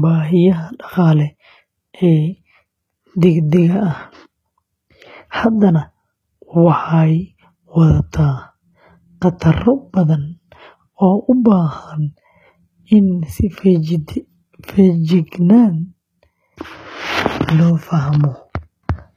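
Speech throughout, with plainly audible HE-AAC compression damage: the top end stops at 14.9 kHz and the treble sounds rebuilt, giving gritty, lispy s sounds. That's likely spectral band replication at a bitrate around 20 kbps.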